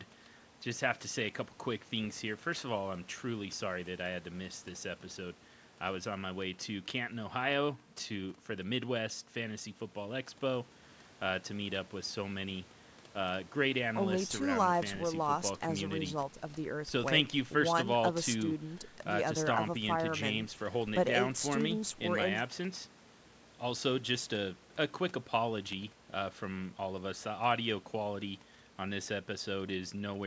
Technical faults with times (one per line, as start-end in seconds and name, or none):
none